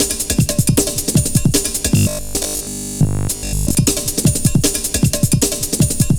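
From 1.97 to 3.75 s a rigid 50 Hz metallic buzz sets in, robotic sound from repeated short buffers, likely from roughly 70% of 20 ms blocks being replayed.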